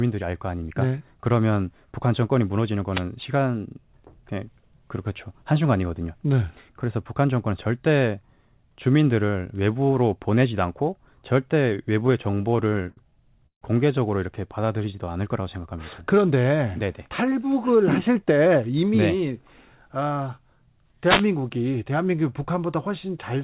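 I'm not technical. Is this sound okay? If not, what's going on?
No, there are several faults in this speech recording.

Wireless microphone noise hit, at 2.89 to 3.05 s and again at 21.03 to 21.28 s. The talker's radio microphone sends its sound over the air, and for a moment the signal weakened because reflected radio waves cancelled the direct one. The receiver's own background noise rushed up to fill the gap, so you hear a brief swish or burst of static lying over the voice, lasting under a quarter of a second each time.

Repeated stalls (stutter), from 12.0 to 12.99 s. This recording passed through an internet call, where the voice travels in small packets and the receiving end keeps a short reserve of them. Here the packets kept arriving late, the reserve ran dry 11 times in under a second, and each time the receiver stretched out the last bit of sound to cover the wait, the longest for 77 ms. 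Nothing is lost, but the voice catches and drags.

Call audio freeze, from 13.47 to 13.63 s. The sound briefly holds on itself, fades, and goes quiet for about 90 ms before carrying on exactly where it stopped. The likely cause is a batch of delayed packets emptying the receiver's reserve, so it filled about 150 ms with a fading continuation of the last sound rather than skipping anything.

Jitter buffer slow-down, from 14.48 to 15.13 s. After that hold-up the receiver wanted a bigger cushion of audio, so it quietly repeated tiny slices of the voice many times in a row. This added 90 ms, making the speech play at about 87% of normal speed without changing its pitch, so sounds come out slightly drawn out.

Jitter buffer speed-up, from 17.08 to 18.7 s. Now the receiver had more audio stored than it needed, so it trimmed away tiny slices over and over, about a seventh of a second in total. 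The voice plays at roughly 108% speed at the same pitch and sounds a little hurried.

The call line itself carries nothing above 4 kHz, which gives the whole recording its narrow telephone sound.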